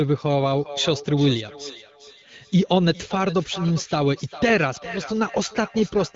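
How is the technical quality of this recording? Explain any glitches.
The recording has one clear problem, a feedback echo between two devices, heard from 0.41 s to the end. The speech is band-limited to about 7.1 kHz, as HD Voice AMR-WB coding does.

From 0.41 s, each stretch of speech comes back roughly every 0.4 s. Two devices in the same room are on the call. One plays what the other's microphone sent, and that microphone picks it up again. Each echo canceller only removes its own device's playback. The repeats sound thinner and more ringing, peaking at about 16 dB below the speech.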